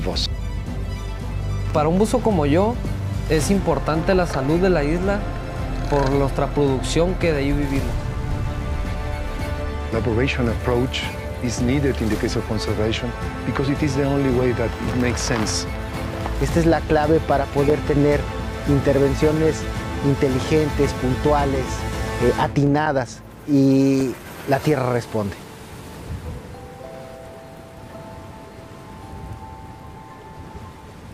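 Nothing goes wrong anywhere in the clip; there's no technical fault to point to at any moment.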